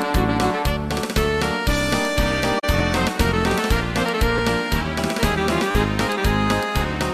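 From 2.59 to 2.64 s, two AAC frames had flipped bits that the decoder detected and concealed. This is a corrupt frame concealed. Brief clicks at 2.79 s and 4.38 s, then a short buzzing stutter from 5.71 to 5.75 s, come from a repeated buffer. Each time, late audio made the device replay a segment that fits a 10 ms buffer, once at the first two points and four times at the last.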